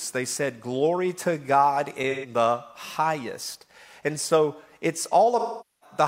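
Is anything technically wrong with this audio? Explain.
Yes. AAC frame loss with concealment occurs twice, at 2.10 to 2.30 s and at 5.39 to 5.97 s. Missing frames, about 128 ms and 427 ms of audio, were patched from the last good spectrum. The short gap sounds smeared and noisy; the longer one decays toward silence before fading back in.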